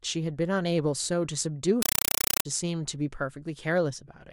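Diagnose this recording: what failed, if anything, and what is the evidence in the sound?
A compressed stream played as audio takes over the speech from 1.82 to 2.45 s. The failure is at playback, on the digital output link. A very loud, chattering static replaces the speech, pulsing 31.25 times a second, each pulse a burst of noise about 5.33 ms long followed by silence. The receiver treated encoded data as ordinary samples instead of decoding it. Each burst is one frame's payload, and the gap is its zero padding, which points to an AC-3 stream at around 256 kbps.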